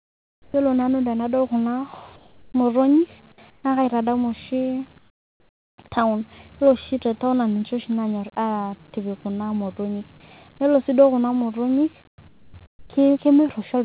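The clip is speech, and seven pauses lose their real background. It is swapped for comfort noise, likely because the sender's voice detector stopped transmission during silence. The stretches run from 0 to 0.54 s, 2.16 to 2.54 s, 3.5 to 3.64 s, 4.98 to 5.78 s, 12.08 to 12.18 s, 12.28 to 12.54 s and 12.66 to 12.9 s. In each, the room's texture gives way to flat, even hiss. That hiss is quieter, mostly by about 7 to 11 dB. It drops by about 14 dB at 4.98 s and by about 24 dB at 12.08 s. Like the speech, it stops at 4 kHz, the ceiling of the telephone-band call path.

At 0.52 s the first sound is an onset clipped by the voice detector. About 20 ms is missing, likely because the detector reacted late and comfort noise was played instead. The sound jumps straight in, with no soft rise.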